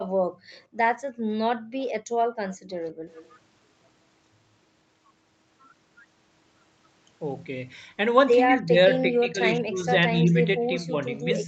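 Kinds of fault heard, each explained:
Background gated by the echo canceller: While the far end's audio was playing out, the canceller clamped the mic and the room tone sank with it. It happens from 0.04 to 1.26 s, dipping by about 16 dB, then again from 1.57 to 3.06 s, going as deep as about 35 dB. Each stretch adds up to roughly 0.7 s of dipped background, and the ambience comes back once the canceller releases.
Echo leak: Faint delayed copies of the speech ride under the main signal, trailing it by 169 ms. They show up at 0.39 to 0.59 s, 1.81 to 1.85 s, 2.52 to 2.57 s and 3.09 to 3.32 s, and they grow from about 35 dB below the speech to about 25 dB below. That's most likely a loudspeaker-side echo canceller not fully cancelling what its mic picked up and sending the remainder back.
Speech suppressed in double talk: The talker's level gets pushed down in pieces, likely because both sides were talking at once and the canceller couldn't tell the local talker from the loudspeaker echo, so it turned everything down. 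From 8.47 to 9.88 s it drops by roughly 20 dB, over about a second in total. From 10.21 s to the end it dips again, by roughly 10 dB.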